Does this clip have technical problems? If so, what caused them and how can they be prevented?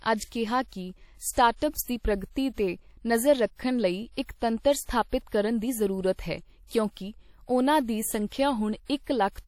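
Yes. Throughout the speech there is plainly audible codec damage, likely WMA compression: ringing, washy smearing and hiss that breathes with the signal, with nothing above 18 kHz, which fits a low bitrate near 48 kbps. Unlike noise-reduction warble, the hiss rises and falls with the signal. Encoding at a higher bitrate or keeping a lossless master prevents it.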